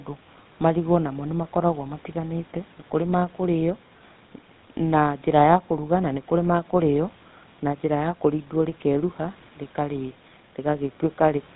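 Throughout the speech, GSM full-rate codec damage is plainly audible: a buzzy, gravelly roughness that fits the 13 kbps GSM full-rate coder, which rebuilds the voice from a vocal-tract model driven by sparse, regularly spaced pulses and passes nothing above 4 kHz.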